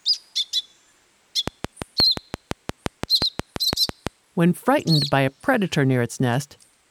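A train of clicks runs through the audio from about 1.48 s to 4.08 s, roughly fifteen sharp ticks at an even 5.8 per second, each standing out around 20 dB above the surrounding sound, so they cut right through and stay audible in any gaps. Because the pulses share the same shape and keep such steady spacing, the likely culprit is periodic interference from nearby equipment or a faulty connection or power supply rather than anything in the source itself.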